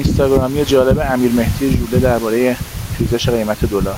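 Throughout the speech, the gain swings up and down by around 10 dB. That is gain pumping, likely from input gain set far too high with a fast limiter or compressor clamping down on each loud syllable. The room noise sits about 32 dB below the speech. Unlike a noise gate, which would cut the gaps to near silence, this fault brings loud and soft parts closer in level, and the speech itself sounds squashed.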